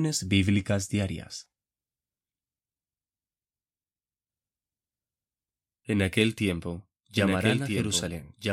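At 7.17 s, just after "aquel tiempo", a doubled audio track appears and runs to the end. A second full-band copy trails about one and a half seconds behind, a few decibels quieter, likely from a slower capture path. Unlike an echo, it starts abruptly, without decay or room colour.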